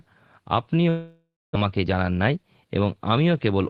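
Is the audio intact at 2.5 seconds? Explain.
No. A jitter buffer speed-up runs from 1.65 to 3.60 s. The receiver had built up excess delay and trimmed it by cutting short pitch-period pieces again and again, about 200 ms in all. The speech plays at about 110% speed with unchanged pitch, so it sounds hurried.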